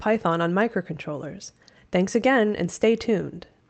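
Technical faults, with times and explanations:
Nothing stood out on listening to this speech clip, which came through an Opus call path.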